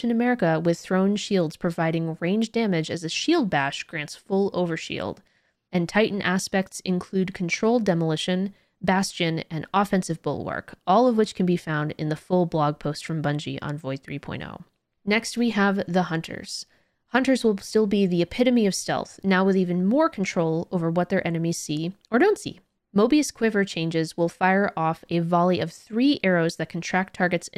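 No technical faults can be heard anywhere in the speech.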